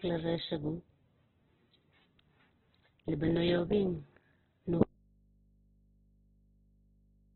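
From the first moment the speech carries heavy Opus compression damage. Nothing survives above 4.2 kHz, so the sound is narrowband, muffled and grainy, with rough, noisy texture where harmonics should be. The damage fits the codec's CELT music mode at a very low rate, likely around 8 kbps, where bands are filled with folded or noise content instead of true detail. On a spectrogram the energy stops at a flat ceiling near 4.2 kHz, and the harmonic lines below it look smeared and speckled.

At 4.83 s the speech cuts out abruptly, an audio dropout to a faint residue that lasts to the end of the clip. What remains is a low mains hum, roughly 35 dB below the earlier level, consistent with the signal likely being lost while the path after the break stayed live and picked up hum. The waveform collapses at once from full speech to a thin, steady trace. On the spectrogram, only a few low, even horizontal hum lines continue across the gap.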